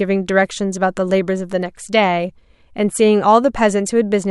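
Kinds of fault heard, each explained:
No kinds of fault are heard in this speech clip.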